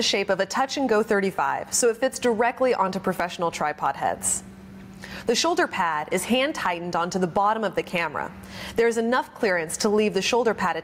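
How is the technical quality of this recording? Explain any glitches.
The big issue here is gain pumping, and it runs through the whole clip. Each time something loud comes in, the level gets yanked down, a swing of roughly 15 dB. The likely cause is input gain set far too high with a fast limiter or compressor clamping every peak. You hear a squashed, flattened sound where loud and quiet parts sit too close together.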